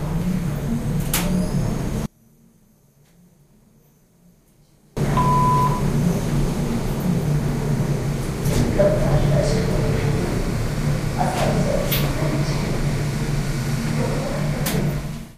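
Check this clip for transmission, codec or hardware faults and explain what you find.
One fault. From 2.06 to 4.97 s the sound nearly vanishes, falling about 34 dB. Likely one channel inverted, so shared content cancels in mono.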